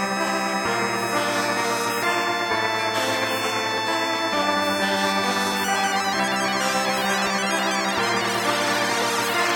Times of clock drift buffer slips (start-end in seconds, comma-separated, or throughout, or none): 0.28-9.02